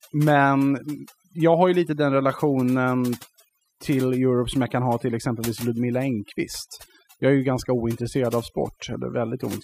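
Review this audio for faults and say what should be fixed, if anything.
Overdone noise removal runs through the whole clip. The noise reduction was set so aggressively that any frequency band sitting close to its noise estimate gets pulled down hard or shut off entirely. The background collapses into near silence dotted with twinkling specks. The quieter parts of the speech are stripped away too. On a spectrogram the gaps between phrases show as black with scattered isolated dots, and the speech looks patchy and hollowed out.

To prevent it, apply gentler reduction with a less aggressive threshold, and check the result by ear on both the gaps and the quiet speech before committing.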